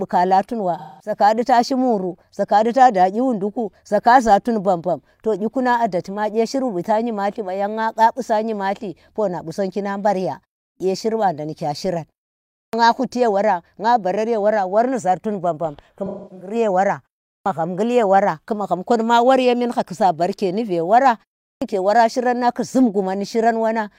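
At 0.78 to 1.17 s there is AAC frame loss with concealment. About 213 ms of audio is missing, which fits five lost frames. The decoder fills the gap from the last good spectrum. That stretch sounds smeared and noisy.

At 10.67 s comes a clipped start after a pause. The output device sleeps through the 0.3 s silence and wakes late. About 133 ms at the onset is swallowed, so the speech begins abruptly. The same happens at 12.60 s, after a 0.56 s pause.

From 16.05 to 16.54 s the AAC frame loss returns. Losses total about 299 ms over 341 ms, with a longest run of about 300 ms. Concealment covers it with a phasey, washed-out patch.

The clipped start recurs at 17.32 s and 21.49 s, each after a pause of 0.33 s. Roughly 126 to 137 ms of each onset is lost.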